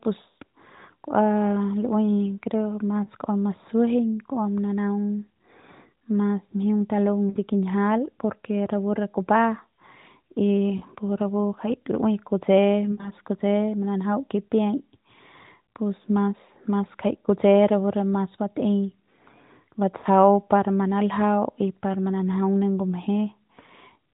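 Lost AMR speech frames occur at 3.04 to 3.10 s, 7.30 to 7.37 s, 10.78 to 10.82 s, 12.92 to 13.12 s and 19.98 to 20.06 s, spanning 20 to 60 ms of missing speech each. Corrupted frames fail their check, so the narrowband decoder repeats the last good pitch and vocal-tract shape at falling gain. Unlike a hard dropout's silent gap or click, each spot sounds like a short smeared, warbling stretch that sags quietly before the speech returns slightly rough.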